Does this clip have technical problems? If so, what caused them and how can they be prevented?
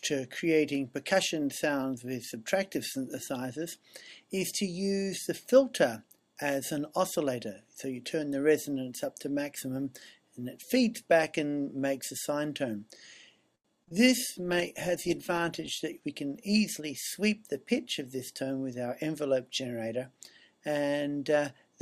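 Yes. Four kinds of fault occur within about three seconds.

A short stall from a late packet runs from 13.55 to 13.66 s. A packet missed its playout time, the jitter buffer ran dry, and the receiver held the last sound for 91 ms until the packet arrived, then resumed at the same point. Nothing is lost, but the sound hangs with a faint buzzy sustain, and playback stays 91 ms later afterwards. A slightly deeper jitter buffer target would absorb this kind of late arrival.

Short concealed packet loss follows right after, as two back-to-back gaps at 13.84 to 13.89 s and 13.89 to 13.93 s, each hiding 20 ms that never arrived. The decoder extrapolated the preceding sound across both holes and cross-faded back into real audio, giving a brief smear or wobble in which any very short transient may be lost. Enabling Opus in-band FEC or redundancy lets the receiver rebuild such single-frame losses.

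A call bitrate drop spans 14.28 to 15.81 s. The sound points to a fall from around 96 kbps to about 22 kbps, held at the low rate for roughly 1.46 s after the bandwidth estimate collapsed. At that rate the encoder quantises coarsely and trims the upper band, so the audio turns muffled and watery. Smoothing the congestion controller's response and setting a sensible minimum bitrate would limit such sharp cuts.

A jitter buffer speed-up runs from 15.84 to 16.81 s. After the earlier delay, the buffer held more audio than its target, so the receiver removed short pitch-period segments repeatedly, taking out roughly 70 ms in total. Playback runs at 106% speed with unchanged pitch, sounding slightly hurried. Spreading this time-compression more gently over a longer stretch would make the catch-up less audible.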